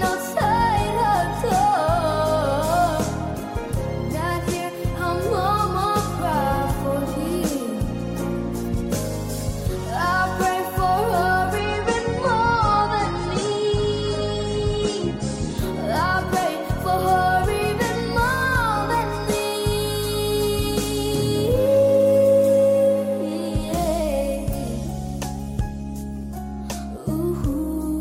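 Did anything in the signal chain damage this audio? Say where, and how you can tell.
Yes, network stage: adaptive stream at a lower bitrate, 11.58–15.58 s. The spectrogram abruptly loses everything above 9.5 kHz without a gap, fitting a slowed connection's 32 kbit/s fallback.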